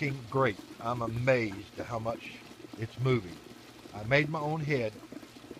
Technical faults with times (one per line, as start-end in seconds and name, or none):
none